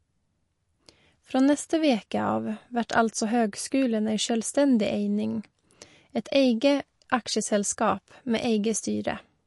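From start to finish the speech has plainly audible MP3 compression damage, likely from a starved encoder at a bitrate around 48 kbps. Nothing comes through above 11.3 kHz, so the top is dull, and weak detail flickers in and out, giving a watery, swirly edge to sibilants.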